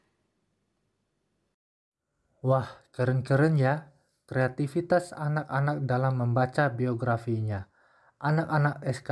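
No technical faults can be heard anywhere in the audio.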